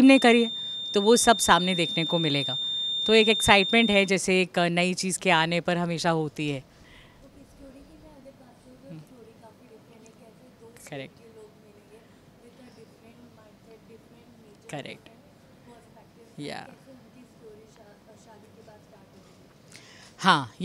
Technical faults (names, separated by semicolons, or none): feedback whistle